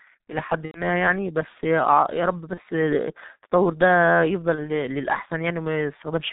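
G.723.1 codec damage runs through the whole speech clip: heavy band-limiting below 4 kHz and a slow-updating voice model leave it muffled and hoarse, with a rate that points to about 6.3 kbit/s. VoIP packet loss concealed by the speech codec occurs at 0.65–0.82 s, 2.54–2.61 s and 4.55–4.71 s. There the decoder extrapolates from its last pitch and filter with fading gain, which fits roughly 90 ms and then 30 ms twice of missing audio, with distortion lingering after recovery.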